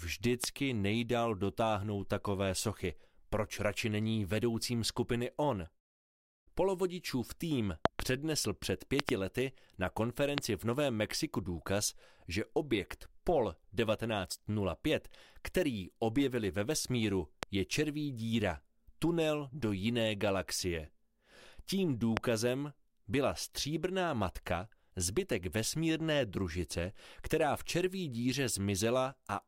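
Sharp, loud pops sit on top of the audio at 0.44–0.46 s, 10.38–10.40 s, 17.43–17.45 s and 22.17–22.19 s, with quick double pops at 7.86–8.02 s and 9.00–9.11 s. Each peaks at roughly 25 dB above the surrounding sound (somewhat less at 17.43 s), while the audio continues underneath. This is loud pop, likely a brief voltage spike from a switch, connector, static discharge or driver glitch entering the signal chain.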